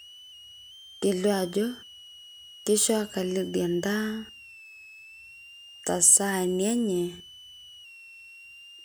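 A speech recording with a switching supply whistle running under it from start to finish. There's a thin, high tone, wandering between roughly 2.6 and 3.2 kHz and centred near 3 kHz, maybe 25 dB under the speech. That drifting pitch is the giveaway: a switching power supply slipping into an audible burst mode or beating against another supply, its frequency shifting as the load changes.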